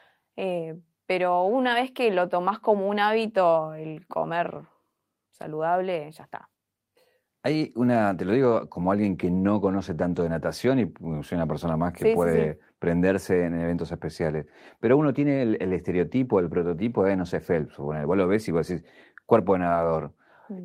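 Nothing stood out on listening to this speech recording.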